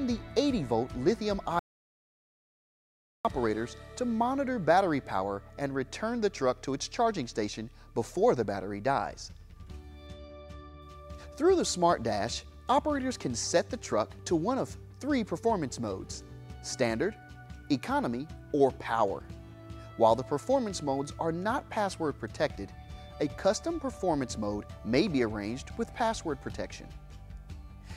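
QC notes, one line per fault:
1.59–3.25 s, audio dropout to silence: the input feed likely failed for about 1.66 s, through a lost connection, a dropped link or a mute, while the recorder kept writing silence. The sound stops abruptly mid-flow and resumes just as suddenly. The gap between is true silence with no room tone or noise floor at all, so it registers as a dead hole rather than a quiet passage, and whatever played during it is missing.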